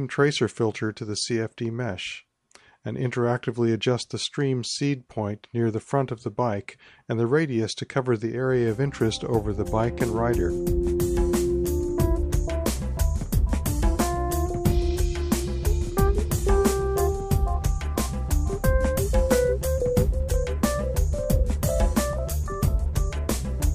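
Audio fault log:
No faults detected in this clip.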